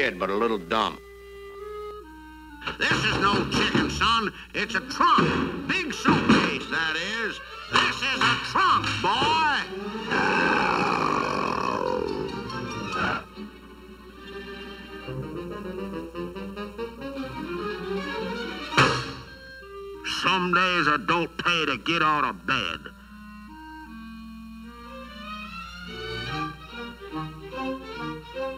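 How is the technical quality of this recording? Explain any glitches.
The recording has one clear fault. From 1.91 s to the end there is channel delay with comb filtering. One channel runs under a millisecond late, and the mono sum cancels evenly spaced frequencies from near 700 Hz upward. The sound turns hollow and phasey.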